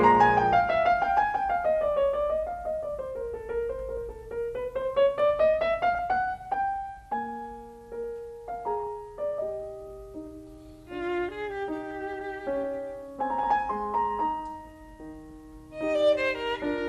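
Throughout the music, the sound is dull and carries a gurgling, granular distortion. This points to MP2 compression at a starved bitrate, likely around 80 kbps. Upper sub-bands flicker in and out, and the bands that remain are coarsely quantised.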